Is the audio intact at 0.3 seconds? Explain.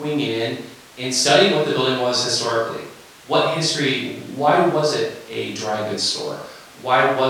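Yes, at 0.3 seconds the audio is intact, with no dropout, click, distortion or other fault at that moment.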